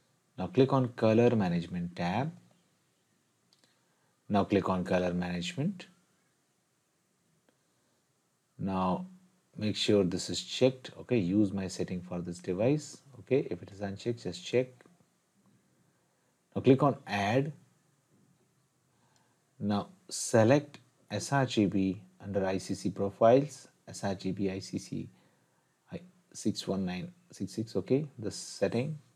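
Nothing here catches the ear as a technical fault; the sound just runs along without a hitch the whole way.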